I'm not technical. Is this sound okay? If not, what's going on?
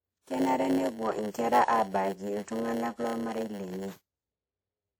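No. A steady buzz runs under the whole speech, repeating 100 times a second, and everything plays slower than it should, at about 0.92 of normal speed. This is a block size mismatch (padded): one step hands over shorter chunks than the next expects, and the gaps are filled with silence.

The speech also has a plainly audible washy, ringing quality, with a hiss that rises and falls along with the sound. That is the typical result of squeezing audio to save space, here likely WMA compression, which throws away detail it judges unimportant.

At 1.30 s a short hiss, about 42 ms long, comes just before a sharp sound, and the sharp sound itself comes out softened. This is pre-echo: the compression smears its noise across a time window, so noise meant for the loud moment leaks into the quiet moment before it.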